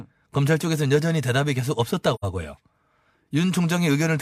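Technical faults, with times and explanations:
2.14 to 2.25 s, AAC frame loss with muting: an 85 ms soft-edged hole, fitting two zeroed frames, and the overlapping windows fade the speech out and back in.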